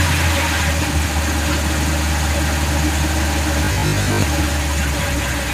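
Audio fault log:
3.64–4.22 s, robotic sound from repeated short buffers: a rigid 50 Hz buzz over most of the stretch, likely a 20 ms chunk looping while fresh audio arrived late.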